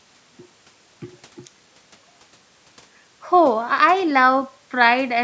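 Nothing stood out on listening to this speech recording, which carries the usual band-limited character of call microphone processing, with the lowest bass trimmed and nothing above 8 kHz.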